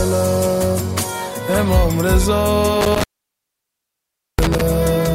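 The audio drops out from 2.81 s to 4.61 s. This is an intermittent contact fault. A loose cable or plug opens briefly and breaks the signal path. Crackle marks the edges. The line stays open for about 1.35 s, leaving faint hiss.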